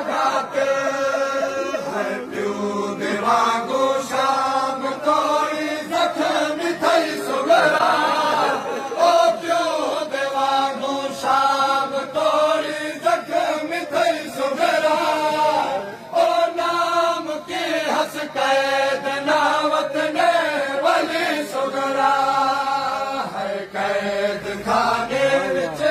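At 7.75 s, running to 7.80 s, a short burst of damaged data in the compressed stream breaks through as a brief blip. Corrupted bytes in that stretch make the decoder misread the affected frames and lose sync until it finds the next valid frame header.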